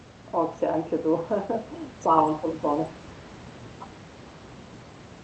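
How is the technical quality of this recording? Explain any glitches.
The main glitch is a pair of brief dips in the speech, which sound like speech suppressed in double talk. From 1.6 to 2.08 s the level sinks a little, and from 2.34 to 2.93 s it drops harder. Likely the echo canceller mistook overlapping far-end talk for echo and pulled the talker down too. The call codec's audio tops out around 8 kHz, and the room noise sits well under the speech.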